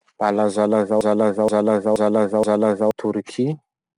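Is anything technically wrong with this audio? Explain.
Yes, two faults are audible in this speech clip.

4-bit ADPCM compression runs throughout. Each sample is coded as a coarse 4-bit step from a prediction, so a gritty hiss tracks every loud syllable, attacks distort, and nothing sounds above 10.6 kHz.

A broken-record loop occupies 1.01 to 2.91 s. A 0.48 s fragment repeats exactly four times back to back, replacing the audio that should have played there. The likely cause is a stalled player or stream resending its last buffer.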